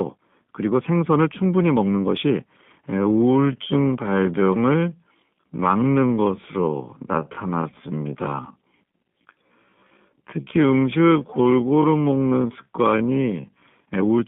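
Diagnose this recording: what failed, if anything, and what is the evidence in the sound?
At the codec stage, the whole recording carries G.729 coding damage that is plainly audible. The band runs only from about 150 Hz to 3.5 kHz, and the speech has a rough, synthetic edge. That pattern fits 8 kbit/s G.729A, which rebuilds speech from a filter, a pitch predictor and sparse pulses.

From 2.86 s to 13.68 s the pace drops abruptly to about half speed (0.53×) while the pitch holds, leaving the speech dragging. This is likely a time-stretched section made in software, which lengthened the audio by repeating short segments rather than by resampling.

At the network stage, VoIP packet loss concealed by the speech codec shows from 7.70 s to 7.74 s. About 20 ms of audio is missing, which fits a single lost packet. The decoder filled the gap by extending its last pitch and filter with falling gain, and the speech stays weak or distorted for tens of milliseconds afterwards.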